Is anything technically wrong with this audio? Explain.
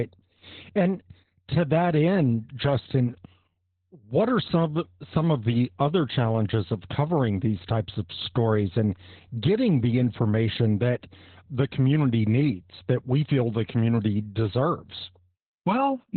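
Yes. The whole clip carries heavy Opus voice compression. Nothing comes through above 4.3 kHz, which fits SILK running narrowband at a very low bitrate, maybe 8 kbps. With the band narrowed and the excitation coded so coarsely, the speech sounds muffled, hoarse and a bit robotic throughout.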